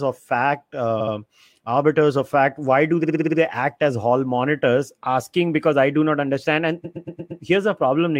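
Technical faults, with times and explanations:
1.00–1.14 s, 3.03–3.38 s and 6.84–7.42 s: repeated frames. The speech stutters, replaying a short block of 70 ms, 58 ms and then 116 ms two, six and five extra times. The same compressed frames were decoded again, adding 0.14, 0.35 and 0.58 s.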